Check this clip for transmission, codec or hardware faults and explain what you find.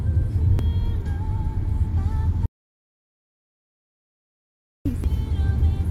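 Three faults are audible: two brief bursts from damaged data in a compressed stream, and one long audio dropout to silence.

At 0.59–0.62 s and again at 5.04–5.07 s, a short glitch cuts through the sound. Damaged data in the compressed stream makes the decoder misread frames and resync.

From 2.46 s to 4.86 s, the sound stops into about 2.4 seconds of dead silence with no room tone. This is an audio dropout to silence, likely from a lost input while silence was recorded.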